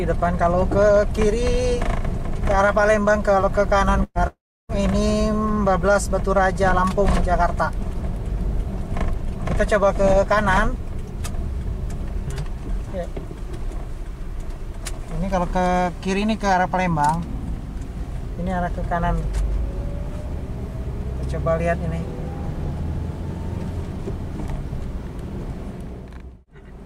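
Around 4.03 s there's a burst of packet loss: roughly 120 ms of audio goes missing, and the receiver covers it by stretching out the last bit of sound it had, fading it down over about 117 ms with a hair of silence at the tail before things pick up at 4.18 s, a little further along than where they left off. Then, barely a tenth of a second later, from 4.27 to 4.72 s, the sound stalls again for longer. You get a short continuation of the last sound that dies away, then about 320 ms of dead air, and the audio returns with something like 420 ms skipped over. That pattern is most likely a long network dropout, with nothing arriving for nearly half a second, so the receiver could only hold the last sound briefly before giving up and going quiet.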